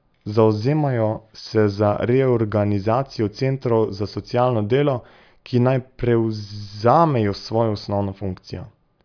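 No technical faults are audible.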